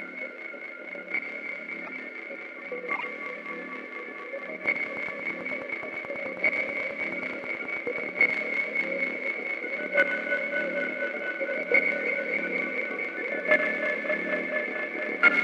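At 1.85 to 1.89 s there's a corrupt frame decoded: flipped bits in a compressed frame got played anyway, so energy lands at wrong frequencies in a short blip near -25 dBFS. Again at 2.95 to 3.04 s, spanning what sounds like several frames, peaking around -20 dBFS.

From 4.66 to 8.31 s a train of clicks runs steadily at about 9.3 per second, around forty alike pops sitting roughly 10 dB over the sound. They're likely from nearby equipment interference or a faulty connection or power supply.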